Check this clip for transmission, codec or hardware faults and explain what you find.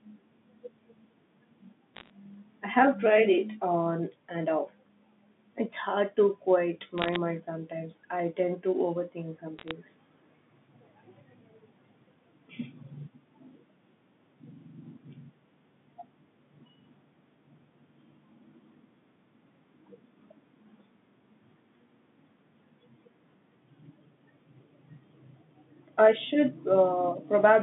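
One fault shows up: bit errors on a digital phone line, in three short bursts. They fall at 1.95 to 2.10 s, just before "I have tried it"; at 6.98 to 7.16 s, between "hard to quiet" and "mind sometimes I tend"; and at 9.59 to 9.71 s, after "tend to overthink some". Each flipped bit corrupts one sample of the coded signal. Hits on the sign or high bits give sharp ticks. At roughly half a percent, lighter in the last burst, they form brief crackle over the speech. The telephone band underneath is audible, topping out near 3.6 kHz.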